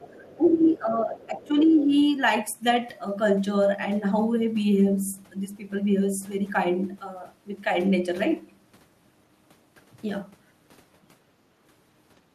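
From 0.0 to 0.13 s the speech dips by about 15 dB, and from 0.03 to 0.36 s a second, faint voice sits underneath at about 30 dB below it. The dip is speech suppressed in double talk. With both sides talking at once, the echo canceller likely could not tell its own talker from the loudspeaker echo and turned everything down. The faint voice is the other side's voice leaking through, likely loudspeaker output the canceller failed to remove from the microphone.

From 0.37 to 1.91 s the speech is held down again, by up to about 10 dB for most of that stretch. The same double-talk suppression is likely at work. During this dip, scraps of the other side's voice come through at 0.62 to 0.71 s, fairly prominent at about 15 dB below the speech. They return at 1.13 to 1.47 s, faint at about 30 dB down, and at 1.63 to 1.85 s, at about 20 dB down. Each is likely residual echo slipping past the canceller.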